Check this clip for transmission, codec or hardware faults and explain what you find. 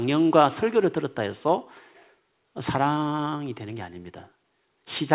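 No transmission, codec or hardware faults are present; the speech is band-limited with nothing above 4 kHz, which fits a narrowband telephone-grade call codec such as G.711.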